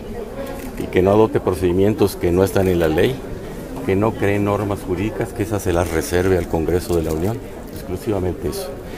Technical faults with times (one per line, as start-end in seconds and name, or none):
1.70 corrupt frame decoded